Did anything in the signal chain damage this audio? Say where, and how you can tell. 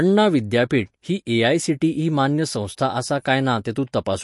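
Yes. The damage is at the codec stage and runs through the whole speech clip: nothing survives above about 11.3 kHz, and the sound has a watery, swirling texture with smeared attacks. That points to likely MP3 compression at a low bitrate, around 48 kbps, where the encoder cuts the treble and drops weak spectral lines from frame to frame.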